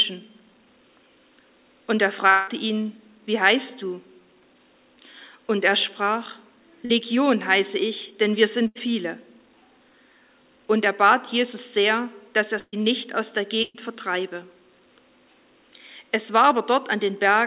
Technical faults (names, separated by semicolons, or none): long network dropout; short concealed packet loss; burst of packet loss